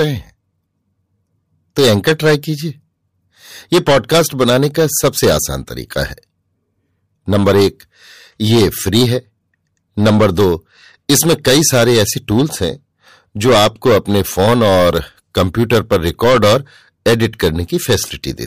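Hard clipping runs through the whole speech clip: the level is pushed about 13 dB past what a stage can pass, so around 7 percent of samples hit the ceiling. Waveform peaks appear sliced flat, the spectrogram shows harmonics smeared high, and every loud syllable carries a harsh fuzz.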